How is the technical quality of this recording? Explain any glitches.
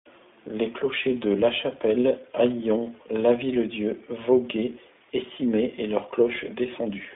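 Quality is limited throughout by narrowband coding. There is iLBC codec damage across the whole clip. Each 20 ms frame is coded independently. Only 250 Hz to 3.5 kHz survives, so the speech sounds thin, rough and synthetic.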